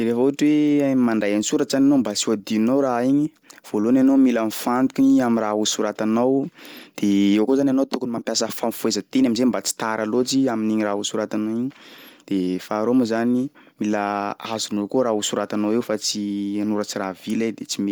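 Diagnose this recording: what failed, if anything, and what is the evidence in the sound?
The failure sits at the codec stage. Throughout the speech there is a breathy, grainy edge, which is likely Bluetooth LC3 compression at around 48 kbps with 10 ms frames. The codec discards weak upper-spectrum detail and fills it with noise. On a spectrogram this shows as speckled, smeared texture reaching 20.1 kHz.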